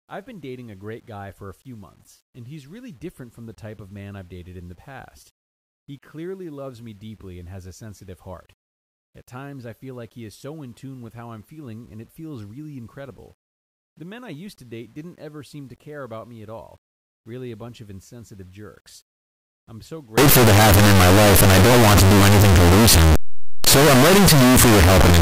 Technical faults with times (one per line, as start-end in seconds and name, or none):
20.18-25.22 signed and unsigned mixed up